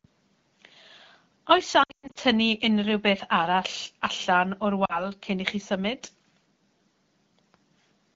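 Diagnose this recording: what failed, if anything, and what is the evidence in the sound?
Lost AMR speech frames on the radio link. Between 1.83 and 2.18 s the speech breaks into warbling dips, the longest run 120 ms, as the decoder repeats the last good frame, fades it quickly to silence, then recovers rough. A shorter 40 ms dip occurs at 4.85 s.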